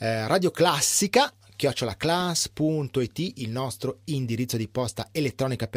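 At about 2.20 s there's a short blip in the speech, and it's a classic corrupt frame decoded. A single compressed frame picked up some flipped bits, and the decoder played it anyway rather than hiding it. The misread gains and codes dump energy into the wrong frequencies for the length of that one frame, so you get a quick blip of misplaced sound. It peaks at around -20 dBFS.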